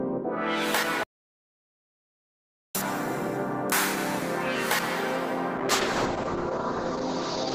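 An audio dropout to silence runs from 1.03 s to 2.75 s. The music stops abruptly and about 1.7 s of it is simply gone, replaced by digital silence with no background or room tone. It then returns mid-phrase as abruptly as it left. The likely cause is a momentary loss of the input signal, such as a disconnected device, a broken link or an accidental mute, while the recording chain kept writing silence in place of the missing audio.

A call bitrate drop begins at 5.56 s and lasts until the end of the clip. The bandwidth estimate for the connection fell, so the encoder had to represent the music with far fewer bits. The sound points to a fall from around 32 kbps to around 8 kbps. At that rate the codec quantises coarsely and discards the upper spectrum, with the audio bandwidth narrowing from 20 kHz to 6 kHz. The music turns muffled and dull, with a rough, watery texture that persists through the final seconds.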